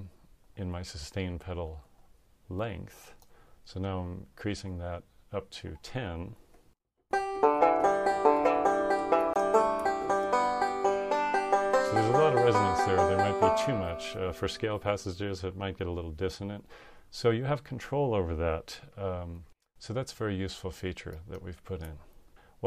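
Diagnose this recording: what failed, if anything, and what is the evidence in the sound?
A block of digital silence at 9.33 to 9.36 s points to the driver or buffer stage. The sound drops out for about 23 ms and resumes with no fade, a short hole rather than a tick. The output buffer was likely not filled in time, which fits a 1024-sample buffer.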